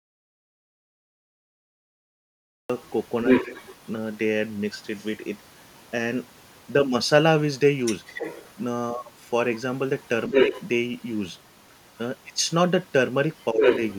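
A speech recording with three kinds of fault. It opens already in an audio dropout to silence: from the start to 2.70 s there is silence with no room tone, and the speech then begins abruptly. That points to the input being lost, likely a disconnected device, a broken link or a mute, while the recorder kept writing silence. Whatever was said in that stretch is gone. Next comes the other side's voice leaking through, where a second voice sits under or over the talker. It is barely there at 2.83 to 2.90 s, roughly 35 dB down. It is about 5 dB louder than the main speech from 3.26 to 3.76 s and again from 10.32 to 10.64 s. It is around 10 dB down from 7.8 to 8.63 s, and at roughly equal level from 13.4 to 13.95 s. This is likely far-end loudspeaker output reaching the microphone that the echo canceller failed to remove. The same overlaps bring speech suppressed in double talk. The near talker's level dips briefly at 3.60 to 3.64 s (about 40 ms, about 5 dB), at 10.29 to 10.53 s (about 150 ms, about 5 dB) and at 13.52 to 13.62 s (about 100 ms, about 10 dB). 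This is the likely result of the canceller being unable to separate the local voice from the echo while both sides talk, so it attenuates both.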